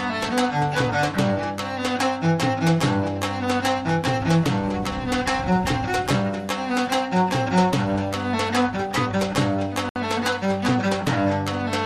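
At around 9.89 s the audio drops to dead silence for about 66 ms, then carries on at 9.96 s. That's most likely a Bluetooth stall: interference delayed packets, the headphones' buffer ran empty, and playback waited for the resends.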